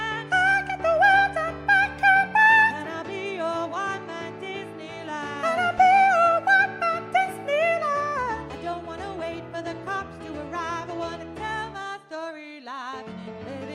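No technical faults can be heard anywhere in it.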